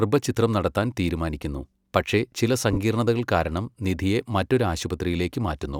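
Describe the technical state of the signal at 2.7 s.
Lost LE Audio frames from 2.73 to 2.77 s, about 37.5 ms, consistent with five 7.5 ms frames: the LC3 decoder refills the gap with the previous spectrum under scrambled signs, fading it, so the speech briefly smears into noise.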